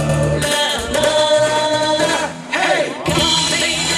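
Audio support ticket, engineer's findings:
Channel delay (doubling), present throughout the clip. One channel arrives late by about 92.9 ms, which fits a 4096-sample buffer left in one path, then both channels are summed to mono. Result: every onset heard twice at equal level, a distinct slap-echo doubling rather than comb filtering, since the offset is too long to fuse. Probable component: per-channel buffering ahead of the mono fold-down.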